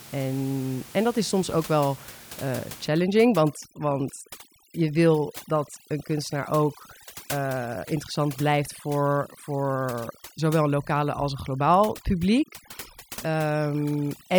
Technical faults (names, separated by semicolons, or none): overdone noise removal